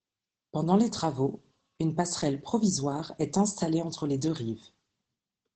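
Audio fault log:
throughout: Opus voice compression. The speech is clearly muffled, hoarse and slightly robotic, with nothing above 9 kHz; the coarse excitation fits SILK at about 12 kbps.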